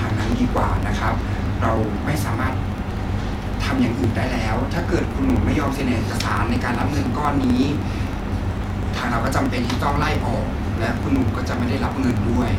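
Periodic USB or driver dropouts run through this speech from 0.07 to 12.48 s: roughly a millisecond is skipped every 0.063 s, giving regular ticks wherever signal sounds.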